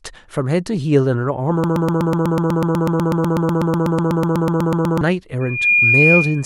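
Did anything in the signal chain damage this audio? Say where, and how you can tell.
Yes. From 1.64 s to 5.01 s the speech locks into a broken-record loop: a 124 ms fragment plays over and over, back to back, about 27 times, and whatever should have been said in those three-plus seconds just never arrives. That's likely a stall in the playback or streaming buffer, where the player kept re-sending the last chunk it had instead of going silent.

Then at 5.41 s a loudspeaker feedback squeal takes over and runs to the end. A single tone at 2.4 kHz swells up in roughly a third of a second and ends up sitting about 5 dB above the speech. That's an acoustic loop in the room, not a digital fault. A mic was hearing its own speaker, and at that frequency the loop gain tipped past one, so the tone kept feeding itself.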